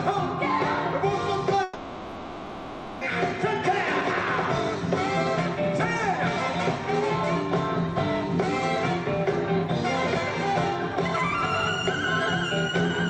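From 1.63 to 3.03 s the sound turns into a fading buzz with no silence, then resumes further on, likely a long network dropout rather than a brief glitch.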